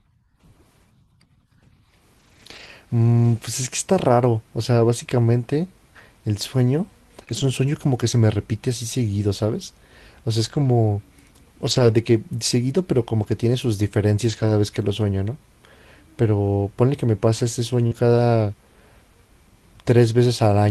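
Speech with lost packets rebuilt from error correction at 2.19–2.69 s, 7.29–7.43 s, 10.45–10.67 s, 11.67–11.93 s, 13.23–13.25 s, 14.29–14.51 s and 17.91–17.97 s. Each stretch plays without any gap but sounds rougher and noisier, because the decoder used the low-bitrate copy of each lost packet that the following packet carried. Short concealed packet loss occurs at 7.25–7.29 s and 17.87–17.93 s. Here the receiver had nothing at all to play, so it extended the preceding sound, which gives a brief smear or wobble rather than a grainy stretch. Both of these lead straight into rebuilt audio.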